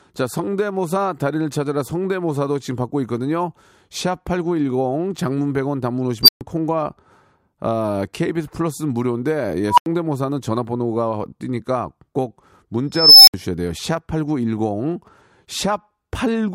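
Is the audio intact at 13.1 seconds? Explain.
No. From 12.93 to 13.34 s an unstable filter runs away: a tone near 5 kHz swells over 0.34 s into clipping, then cuts to 64 ms of silence. On a spectrogram it shows as a brightening horizontal line, and on the waveform as a flat-topped block followed by a gap.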